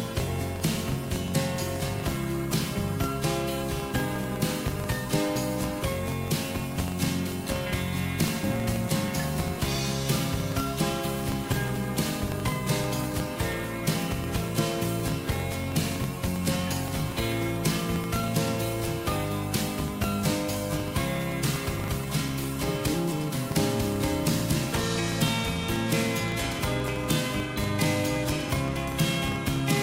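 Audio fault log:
throughout, filter restarted on every block: the processing filter throws away its internal state at each block boundary and starts the next block as if from silence. The mismatch between where the signal was and where the filter restarts leaves a small transient at the start of every block. With blocks arriving every 40 ms, these transients merge into a buzz at 25 Hz that rises and falls with the loudness of the sound.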